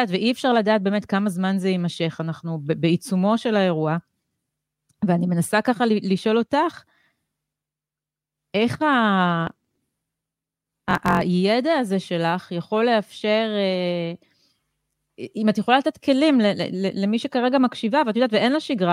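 From 9.45 to 11.22 s the speech shows a block size mismatch (truncated): each block loses its tail, which fits 1024-sample blocks. A 45.9 Hz buzz appears, and the speech runs 1.07 times fast with its timbre unchanged. Spectrograms show vertical lines every 22 ms, and waveforms show matching jumps.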